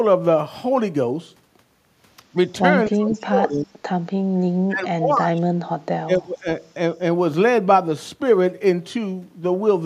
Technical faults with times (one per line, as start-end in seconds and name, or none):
2.89-3.80 speech suppressed in double talk
3.13-3.18 echo leak
4.68-5.54 speech suppressed in double talk
6.05-6.48 speech suppressed in double talk